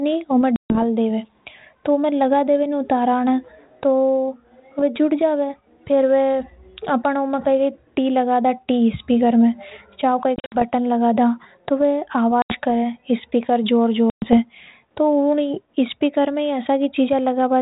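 Packet loss on an ADPCM call cuts hard-edged holes into the speech at 0.56, 10.36 (scattered over 160 ms, longest gap 60 ms), 12.42 and 14.1 s, each 80 to 140 ms of silence. The decoder's adaptive predictor and step size lose track of the sender's, so sound resumes with brief distortion before resettling on the narrowband G.726 ADPCM link.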